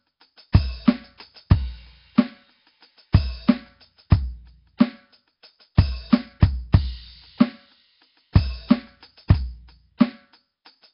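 Across the whole music track the sound has a rough, hissy halo and a smeared, underwater quality. Nellymoser compression is the likely cause, with damage heavy enough to fit a rate near 22 kbps. A spectrogram shows nothing above 5.3 kHz and blotchy noise-filled patches.

At 4.10 s comes a pre-echo. A sharp attack falls late in a coding block, and the noise budgeted for the loud part spills about 14 ms into the quiet before it. It is heard as a brief hiss and a softened onset, and it shows as a smear ahead of the waveform's transient.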